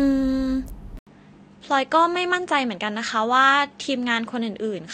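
An input switched to a poorer device at 0.99 s in this speech clip, lasting to the end: after a brief 80 ms gap, the sound loses its top end, with nothing above 9 kHz, and takes on a duller, boxier tone. A faint new background noise appears, roughly 50 dB below the speech, while the level stays about the same. The likely cause is the recording system changing to another microphone or a headset profile mid-take.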